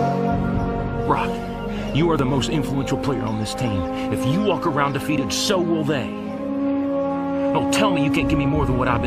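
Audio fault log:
2.19 s, 5.18 s, 8.17 s: audio missing between chunks. Tiny seamless skips of roughly 15 ms recur every 3 s with no silent gap, likely lost at chunk boundaries rather than random dropouts.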